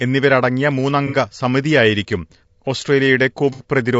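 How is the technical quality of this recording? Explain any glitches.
The recording is clearly degraded, with codec roughness throughout and two brief dropouts.

Low-delay AAC compression is likely. Its short frames resolve pitch harmonics poorly. The speech sounds rough and grainy, which points to a low bitrate near 32 kbps.

AAC frame loss with concealment occurs at 1.07 to 1.16 s and 3.53 to 3.64 s. The decoder rebuilt missing frames from earlier spectrum. Each loss sounds like a smeared, noisy patch.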